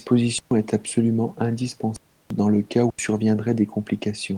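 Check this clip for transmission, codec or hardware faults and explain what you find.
The speech has three dropouts from an underrun with held sample, at 0.39–0.51 s, 1.96–2.30 s and 2.90–2.99 s (126, 341 and 85 ms). Each time, the output buffer emptied and the converter froze on its last value. On a waveform this is a flat line; a spectrogram shows a blank band. The sound cuts out almost silently, then returns. Roughly 150, 300 and 100 ms of speech is skipped, and the longest gap fits a 16384-sample buffer. Room noise sits about 41 dB below the speech.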